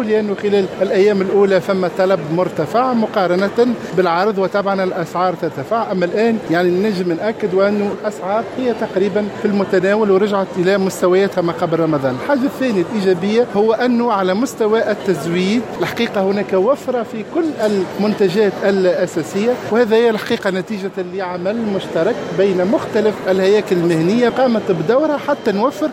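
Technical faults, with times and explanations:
No technical faults can be heard anywhere in this clip. Nothing in the audio calls for a time or an explanation.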